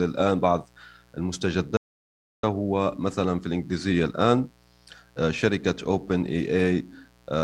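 A mains buzz runs under the speech from start to finish, a steady raspy hum built on 60 Hz with harmonics climbing into the kilohertz range. It sits roughly 35 dB below the speech. Sharp switching spikes from a dimmer, rectifier or unshielded line are getting into the signal path.

From 1.77 to 2.43 s there is an audio dropout to silence. The speech cuts off abruptly for about 663 ms, leaving silence with no room tone, then resumes mid-flow. The likely cause is a lost input, with silence written for the gap.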